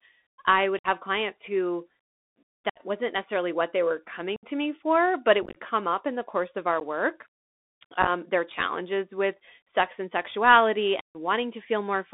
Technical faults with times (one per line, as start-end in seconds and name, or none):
0.00-12.14 Bluetooth CVSD headset codec
0.79-0.87 unconcealed Bluetooth headset packet loss
2.70-2.81 unconcealed Bluetooth headset packet loss
4.36-4.44 unconcealed Bluetooth headset packet loss
5.42-5.57 unconcealed Bluetooth headset packet loss
6.80 unconcealed Bluetooth headset packet loss
8.01-8.09 unconcealed Bluetooth headset packet loss
11.01-11.17 unconcealed Bluetooth headset packet loss